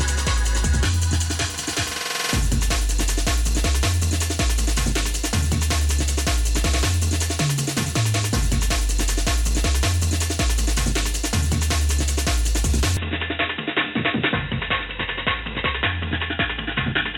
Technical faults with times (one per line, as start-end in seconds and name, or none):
12.97-17.18 input switched to a poorer device